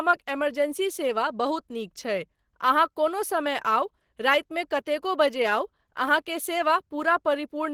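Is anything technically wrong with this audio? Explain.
Yes. The speech sounds plainly muffled and hoarse from start to finish, with a grainy, rough texture. The likely cause is Opus compression in its hybrid speech mode at a low rate, which fits about 16 kbps. Bandwidth stays full, reaching 20.2 kHz.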